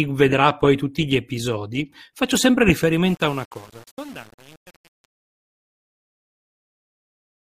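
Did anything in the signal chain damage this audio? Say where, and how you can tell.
Yes. Truncation distortion on a fade runs from 3.06 s to the end at 7.47 s. As the speech fades out, the tail turns gritty. An undithered gain stage is rounding the fade onto a coarse grid that fits about 7 bits, leaving square steps where the waveform should be smooth.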